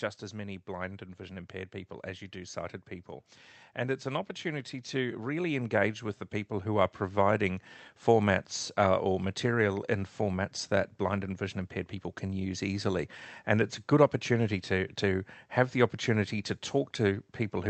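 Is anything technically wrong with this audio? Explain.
Yes. From 0.3 to 7.58 s, automatic gain rising: the gain control judged the input too quiet and raised gain by about 10 dB, so voice and background swell together until just before "formats uh or material". The Opus call path's 8 kHz bandwidth limit is also audible.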